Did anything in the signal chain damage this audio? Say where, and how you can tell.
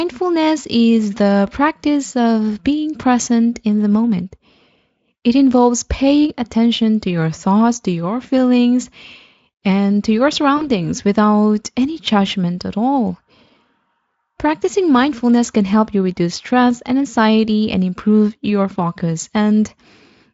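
Yes. VoIP packet loss concealed by the speech codec, at the network stage, runs from 10.57 to 10.71 s, between "and to your" and "without any judgment at". The gap sounds like about 40 ms of missing audio, which fits two lost frames. The Speex decoder filled it by repeating its last pitch and filter at falling gain, so the sound smears into a fading buzzy tone or coloured noise. Because each frame builds on the previous one, the sound stays weak and coloured briefly after packets resume.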